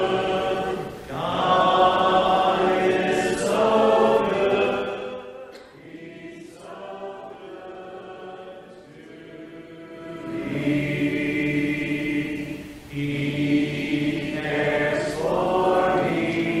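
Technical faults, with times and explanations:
4.62–5.29 s, zipper noise: the level falls by roughly 20 dB in unsmoothed steps, around a hundred per second. Each jump clicks, giving a buzzy ticking. The waveform envelope looks like a staircase, and a spectrogram shows faint, regularly spaced vertical lines.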